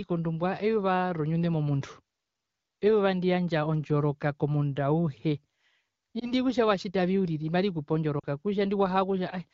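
Radio errors corrupted speech frames, so the AMR-WB decoder replayed the last good settings at falling gain. At 6.19 to 6.33 s, just before "kutja watjitavi uriri marikupe", a brief warbling dip fits one lost 20 ms frame. At 8.19 to 8.26 s, right after them, a drop to near silence suggests about 40 ms lost.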